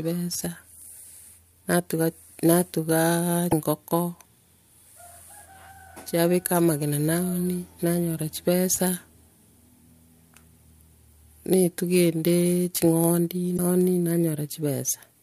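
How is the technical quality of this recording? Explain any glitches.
The quality is compromised: there's a steady buzz under the whole speech clip, plus two brief glitches.

The buzz is a block size mismatch (truncated). One stage writes longer blocks than the next reads, so each block's tail gets dropped. Those regular cuts produce a 91.9 Hz buzz, while pacing stays at 1.0x normal speed.

The glitches come from damaged data in a compressed stream, at 3.48–3.53 s and 13.54–13.59 s. Corrupted frames there throw the decoder out of sync while it hunts for the next frame header, and you hear a short glitch each time.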